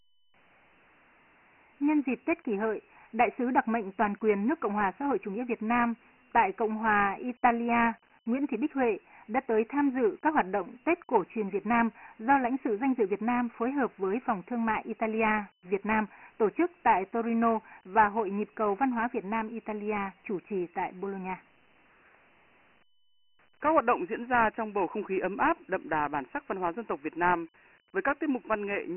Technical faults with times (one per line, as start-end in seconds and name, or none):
0.00-28.96 Dialogic VOX ADPCM